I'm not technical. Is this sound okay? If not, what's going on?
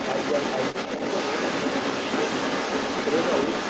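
No. The whole clip, from start to finish, has the other side's voice leaking through, about as loud as the main talker. The other person's audio is likely playing from a loudspeaker and getting picked up by the microphone without the echo canceller removing it.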